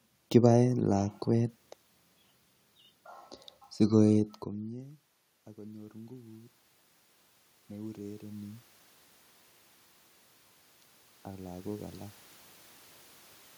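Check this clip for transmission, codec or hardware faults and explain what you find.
Automatic gain rising occurs three times: 5.55–6.6 s (about 4 dB), 7.68–8.71 s (about 5 dB), and 11.25–12.03 s (about 3 dB). Each time, the gain control slowly lifts a weakened input, so voice and room noise swell together. In the movement near 4 s, only the voice changes.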